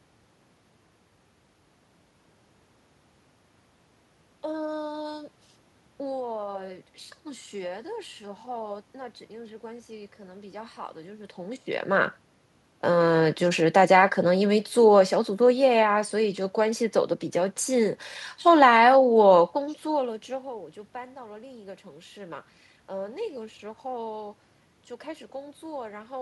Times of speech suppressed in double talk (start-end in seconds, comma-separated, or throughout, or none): none